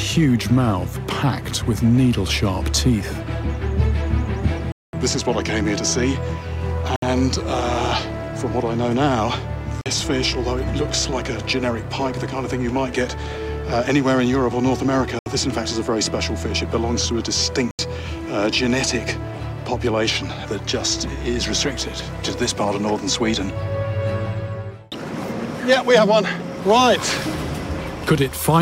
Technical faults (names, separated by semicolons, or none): Bluetooth stall